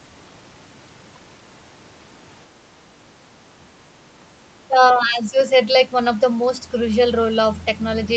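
From 4.68 to 5.37 s, the echo canceller likely mistook the talker for loudspeaker echo while both ends spoke at once and turned the speech down. The result is speech suppressed in double talk: the voice sinks by roughly 10 dB, for about half a second in all.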